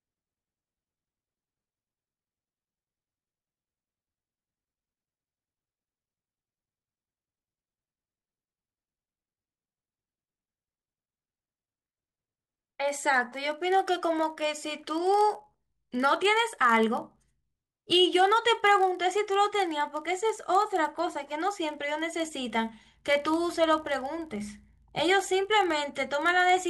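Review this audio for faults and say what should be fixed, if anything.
Block size mismatch (padded) throughout: each 1024-sample read gets a short zero-filled gap, producing a 43.1 Hz buzz under the speech, slowed only to 0.999x. Prevent it by matching writer and reader block sizes, or buffering until full blocks are available.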